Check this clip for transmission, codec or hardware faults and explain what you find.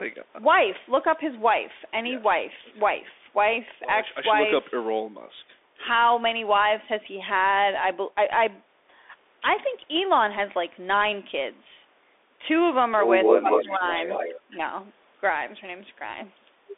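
Three faults are present: a narrowband headset codec across the whole clip, and a short cluster of echo problems between 13.22 and 14.56 s.

Throughout, the Bluetooth CVSD headset codec is clearly audible. Its one-bit delta coding, consistent with a 64 kbit/s headset link, lets its step size lag loud peaks, so sibilants sound scratchy over a granular hiss. On a spectrogram, energy sits between about 300 Hz and 3.6 kHz, with nothing above 3.8 kHz.

From 13.22 to 13.77 s and again from 13.93 to 14.56 s, an echo leak is heard. A copy of the far-end voice trails it by 218 ms, likely because the echo canceller failed to remove loudspeaker sound picked up by the microphone. The first copy is roughly 5 dB louder than the speech, and the second is far quieter. A spectrogram shows the same formant patterns repeated 218 ms later.

From 13.41 to 13.83 s, speech is suppressed in double talk. While both sides overlap, the talker's voice sinks by up to roughly 15 dB across about 300 ms. 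This is likely the canceller damping everything because it cannot separate the talker from the echo. The waveform shows an envelope dip.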